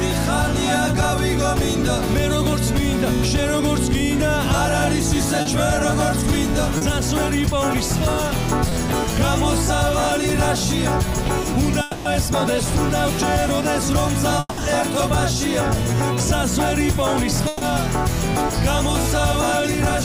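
Short concealed packet loss occurs at 5.41 to 5.47 s, 6.77 to 6.83 s and 8.69 to 8.73 s. About 40, 40 and 20 ms of audio missed the decoder in time, and the receiver extended the preceding sound to bridge each hole. Each gap is heard as a brief smear or wobble.

Between 11.81 and 12.07 s, and again between 14.39 and 14.59 s, the audio is replaced by a continued tone that fades over about 240 ms and then about 180 ms. The second ends in roughly 20 ms of silence. The likely cause is a long network dropout, with the stream resuming later and the covered stretch lost.

At 17.47 to 17.63 s, a burst of packet loss took out about 140 ms. The receiver held and faded the last sound as a buzz or hiss before the audio picked up further along, with the middle missing.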